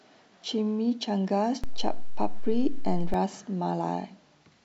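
A short speech recording carries a DC step. At 1.64 s the waveform's zero line jumps by about -22 dBFS, which is heard as a low thump. The offset lasts until 3.14 s. The speech runs on unchanged throughout. Such a jump points to a converter recalibrating or an offset input being switched into the path.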